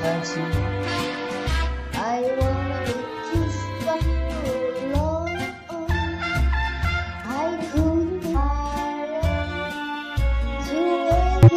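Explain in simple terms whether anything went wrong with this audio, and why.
Blips at 3.90–3.96, 8.32–8.37 and 11.43–11.50 s come from damaged data in a compressed stream: corrupted bytes make the decoder misread frames until it resynchronises.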